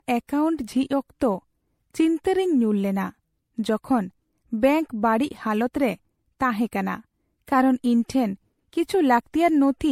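A speech clip with generation loss throughout. The sound is swirly and hollow, with a smeared, watery texture. Consonant attacks blur instead of landing cleanly. Nothing is present above 16.5 kHz. The damage is heavier than a single lossy encode would leave. The likely cause is repeated MP3 encoding, around five passes, at a rate that fits 64 kbit/s. Each pass requantises on a shifted frame grid, so noise and spectral holes accumulate.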